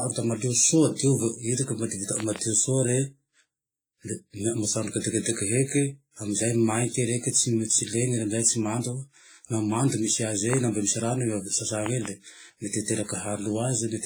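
Throughout the speech there is heavy codec damage that likely comes from WMA compression, an early WMA 1-style transform encoder at what sounds like about 24 kbps. Its long blocks smear quantisation noise over tens of milliseconds, giving a washy, ringing hiss that rises and falls with the speech rather than sitting steady like background noise.

From 2.20 to 2.38 s, two loud pops stand around 15 dB above the speech, which carries on beneath them. A single pop follows at 10.53 to 10.55 s, and two more come at 11.86 to 12.08 s, right after "rano i ave". Each is a sudden voltage pulse, likely from a plug, switch, static or driver glitch, added on top of the signal. Unlike pre-echo, these pops are not tied to attacks in the speech.

At 5.00 to 5.04 s and again at 12.84 to 12.88 s, pre-echo puts a brief hiss of about 46 ms and 40 ms just before a sharp attack. Noise sized for the loud onset has spread back through its coding block, so it leads the transient rather than following it, and the attack sounds softened.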